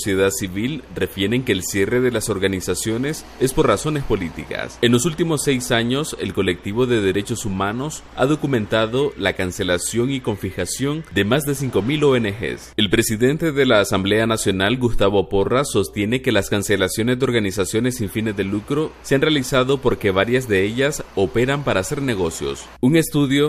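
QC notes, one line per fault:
No faults found; nothing to log.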